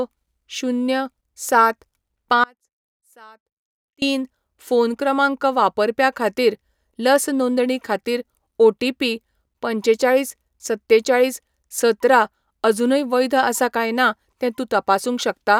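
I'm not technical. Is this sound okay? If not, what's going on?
No. From 2.44 to 4.02 seconds, about 1.6 seconds of the speech drops out to a faint residue: only a very quiet trace remains. Unlike a natural pause or fade, it cuts off and returns abruptly, likely from a brief signal loss.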